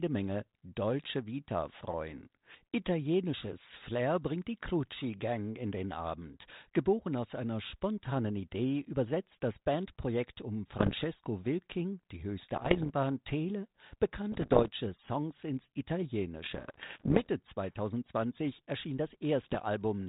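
Pops and short rough, gritty bursts with brief jumps in level break into the speech at 10.78 to 11.04 s, 12.56 to 12.90 s just after "die höchste", 14.32 to 14.69 s, 16.44 to 17.28 s, and 19.43 to 19.60 s. These are bit errors on an ADPCM link, around 0.7 to 2 percent of bits. Each flipped bit throws the decoder's step size and prediction off, so the damage rings on briefly. All of it sits within the narrowband G.726 sound.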